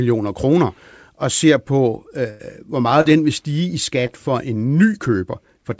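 Right after "og ser på øh", from 2.30 to 2.41 s, the speech freezes into a held, fading tail and then jumps ahead. This is a burst of packet loss: about 100 ms of audio never arrived, so the receiver stretched the last sound for roughly 90 ms before resuming further on.

Shorter glitches follow. Between "ser på øh hvor" and "den vil stige i", at 3.01 to 3.07 s, there is a brief smear, and just after "den vil stige i", at 4.07 to 4.10 s, a quick wobble. Both are short concealed packet loss: about 40 ms and 20 ms went missing, and the decoder bridged each hole by extending the preceding sound before blending back into the real signal.

Throughout, the G.722 call path at 64 kbps leaves nothing above 8 kHz.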